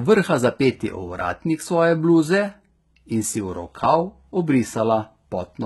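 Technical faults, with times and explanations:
Throughout, HE-AAC compression. Heavy damage, nothing above 11.8 kHz. Treble is copied up from lower bands and sounds gritty, likely from a bitrate near 16 kbps.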